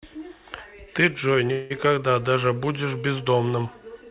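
Speech, carried through a call path with nothing above 4 kHz, consistent with G.711 mu-law, has a call audio freeze from 1.52 to 1.72 s. For about 180 ms the last sound is stretched into a fading buzz rather than dropping to silence. The speech then resumes exactly where it stopped, with nothing cut out, and everything after runs about 180 ms later. This sets it apart from a packet-loss dropout. The likely cause is delayed packets that let the jitter buffer run dry.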